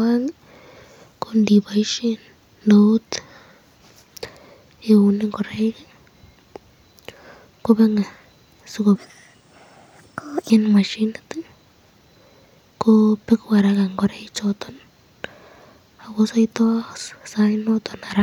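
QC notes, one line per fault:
8.95–10.5 s, section at the wrong speed: the speech jumps to 1.35 times normal rate and rises about five semitones, sounding rushed and chipmunk-like before snapping back. Speed and pitch shift together, so this section was likely resampled against the wrong clock.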